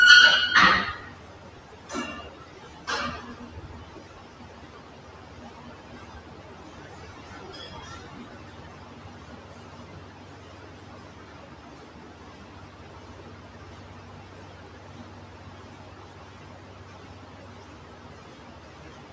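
From the start and throughout, a noise suppressor built for speech is working on music or sounds. It mistakes steady tones and ambience for noise. Level drops on sustained parts and tails, by about 5 dB, and recovers on attacks. The result is a pumping and flutter. Held sounds thin out and decays sink early. The call microphone path passes nothing above 8 kHz, so the top end is capped.

From 3.89 s to 9.36 s, a train of clicks rides over the sound. There are around seventy, at roughly 13.9 per second. The spacing is irregular, so it ticks unevenly rather than buzzing. Each click has much the same shape and peaks about 5 dB above the surrounding audio. The likely cause is interference from nearby equipment or a faulty connection or power supply.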